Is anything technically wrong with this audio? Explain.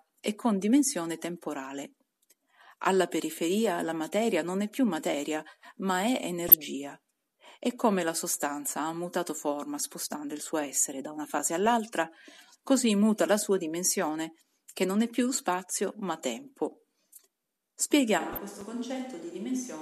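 Yes, the speech has three kinds of fault.

Corrupt frame decoded: at 6.48–6.54 s after "più materia ma è", at 10.04–10.11 s between "sostanza ha mutato forma" and "il suo essere da", and at 18.33–18.38 s, the decoder played damaged compressed frames. Misread data sent energy to the wrong frequencies, so each event is a brief chirpy burst spanning a few frames.

Block of digital silence: at 11.39 s after "suo essere da una", and at 18.61 s, zeros replaced the samples. The sound drops out for roughly 7 ms and 5 ms with hard edges, heard as a sharp tick or pop.

Switch to a distant microphone: from 18.20 s to the end, the close microphone's signal was likely lost and a farther one took over. The voice abruptly turns hollow and roomy with thinner bass, roughly 10 dB quieter, with background noise only about 30 dB below the speech.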